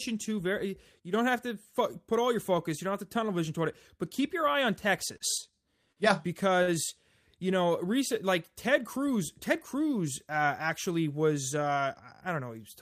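From 1.00 to 1.14 s, between "to very" and "don't have to", the speech level dips abruptly by about 6 dB, as it does again from 5.38 to 5.53 s. This is likely one channel dropping out, leaving the mono sum at half level.

After "keep your eye on" at 5.17 to 5.23 s, a sound is held unnaturally long, and the same happens at 5.92 to 5.99 s and 6.62 to 6.70 s. Each is a short stall from a late packet: the receiver stretched the last audio by 28, 43 and 50 ms, and nothing was lost.

From 8.79 to 9.80 s, between "you know recent like" and "uh actually was", the speech runs slightly fast at unchanged pitch. This is jitter buffer speed-up, running about 3% fast by trimming around 40 ms of pitch periods.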